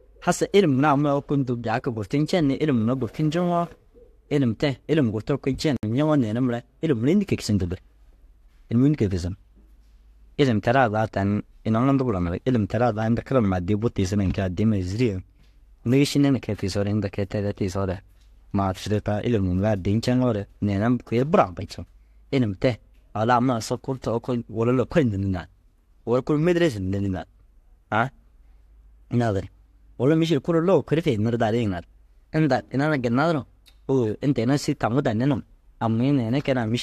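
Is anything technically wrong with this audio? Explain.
Yes. At 5.77 to 5.83 s the speech drops into a sudden 65 ms silence with smeared edges, then resumes where it stopped. This is a gap at a join of encoded pieces: separately encoded segments were spliced untrimmed, leaving encoder start delay and final-frame padding.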